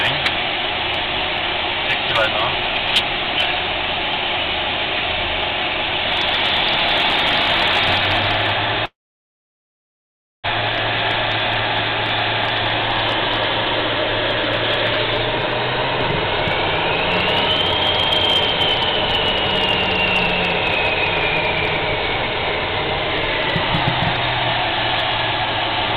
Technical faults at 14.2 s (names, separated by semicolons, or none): none